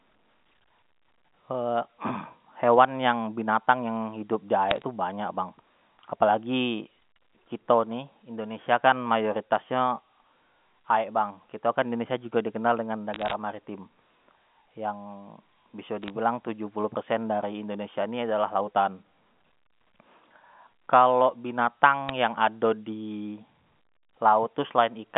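Bit errors on a digital phone line show up as four short bursts of crackle, at 4.70 to 4.82 s, 13.14 to 13.33 s, 16.02 to 16.10 s, and a brief one at 22.09 s. Flipped bits on the G.711 A-law link each corrupt one sample, and hits on the sign or upper bits produce sharp ticks over the unchanged speech. The error rate is a small fraction of a percent, heaviest in the 13.1 s burst.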